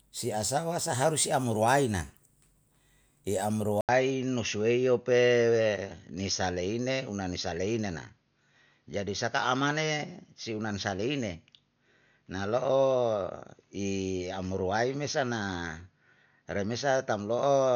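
A speech recording that drops out for about 80 ms at 3.81 s and comes back dull, with nothing above 6.6 kHz through to the end. The level barely changes, and a faint new noise floor sits around 50 dB down. Most likely the input switched to a poorer device.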